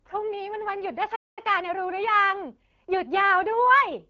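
At 1.15 s the speech falls silent for about 0.21 s, until 1.39 s, then resumes. It is a playback stall, likely the player running short of data. Unlike a dropout, the output simply goes silent until the player recovers.

From 1.39 s to 3.53 s a time-compressed catch-up follows. The player trims its backlog by splicing out short pieces, so the speech runs about 1.1 times fast at unchanged pitch. A plain speed-up would raise the pitch instead. The limited band, with nothing above 7 kHz, fits the AMR wideband codec at around 12.65 kbit/s.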